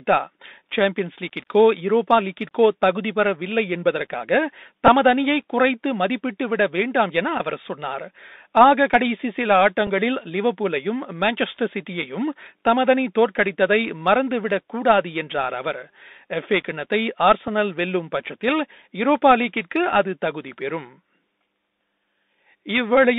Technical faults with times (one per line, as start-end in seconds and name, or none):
0.00-23.18 Bluetooth CVSD headset codec
4.87 Bluetooth headset packet repeated
9.87 Bluetooth headset packet repeated
17.48 Bluetooth headset packet repeated